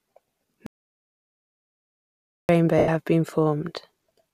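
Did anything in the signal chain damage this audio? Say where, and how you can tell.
Yes. An audio dropout to silence spans 0.66 to 2.49 s. The waveform flatlines to silence with no room tone, likely from a lost input device or link.

Lost LE Audio frames on the Bluetooth link at 2.78 to 2.88 s. LC3 concealment reuses the last spectrum with random signs, showing as a smeared, fading noisy patch that fits about ten 10 ms frames.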